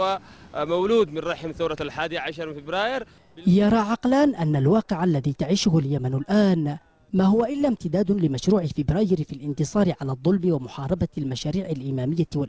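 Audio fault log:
7.52–7.56 s, short concealed packet loss: about 20 ms of audio never arrived in time, so the receiver extended the preceding sound and crossfaded back, heard as a brief smear or wobble. On a spectrogram, a short blurred, overly smooth patch interrupts otherwise band-limited content below 8 kHz.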